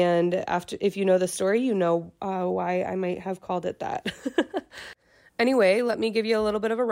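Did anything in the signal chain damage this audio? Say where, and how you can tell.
No, nothing in the signal chain audibly damaged this speech recording. No stage, from capture through to playback, leaves any trace that can be heard.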